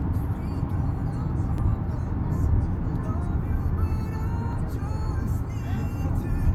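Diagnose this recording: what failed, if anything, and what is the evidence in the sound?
The fault sits at the codec stage: damaged data in the compressed stream. Brief blips at 1.58 s and 4.53 s, each only a few milliseconds long, mark frames the decoder could not read correctly, losing sync until it found the next valid frame header.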